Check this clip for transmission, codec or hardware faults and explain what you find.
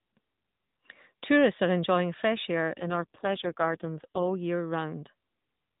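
One transmission fault is audible. An AMR rate drop runs from 2.78 s to 4.38 s: the mobile link apparently switched the AMR-NB codec to a much lower rate to protect the bits, which fits a step from 12.2 to 4.75 kbps. The speech stays narrowband with no gap but turns buzzy and synthetic until the higher rate returns.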